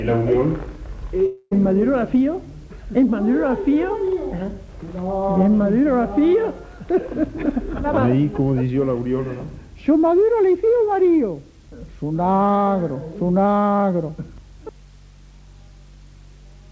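From 1.26 to 1.53 s, incoming audio stopped reaching the receiver of this call path, which cuts everything above 8 kHz, consistent with G.722 at 64 kbps. That is likely a long network dropout. The last sound stretches into a fading buzz or hiss for about 0.25 s, then 30 ms of silence, and the audio resumes with 0.26 s missing.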